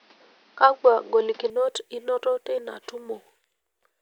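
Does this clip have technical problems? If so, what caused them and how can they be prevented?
Yes. From 0.0 to 1.5 s the input was likely switched to a poorer device, which cuts everything above 6.2 kHz and adds faint new noise and a small level shift until the sound clears just before "inoto teina". Prevent it by locking recording to one input device and disabling automatic device switching.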